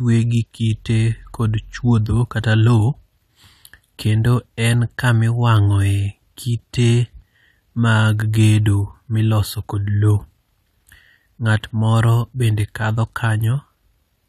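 Three sharp single clicks sound at 4.58 s just before "en kama", at 5.57 s just after "en kama", and at 6.83 s. Each is likely dropped samples, where a fraction of a millisecond goes missing and the waveform jumps abruptly.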